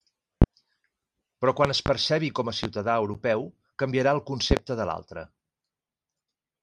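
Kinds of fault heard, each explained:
Loud pop: a sudden voltage pulse, likely from a plug, switch, static discharge or driver glitch, is added to the signal and heard as a sharp thump. Single pops fall near 0.42 s and 2.64 s (after "percebi com a"), and double pops at 1.65 to 1.9 s and near 4.5 s, between "canviarà el" and "de l'altre". They peak about 15 to 25 dB above the speech. Unlike a dropout, the speech carries on intact underneath.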